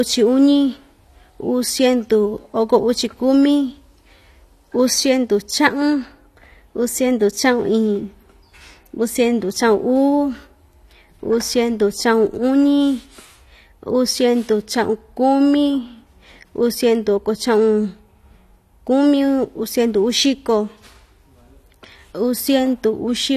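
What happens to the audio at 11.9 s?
At 11.9 s, as through the whole clip, the speech carries AAC compression damage, likely from low-bitrate coding around 32 kbps: nothing sounds above 13.5 kHz, and coarse quantisation leaves sibilants smeared and fizzy.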